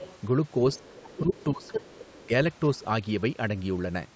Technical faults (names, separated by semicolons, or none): other side's voice leaking through; speech suppressed in double talk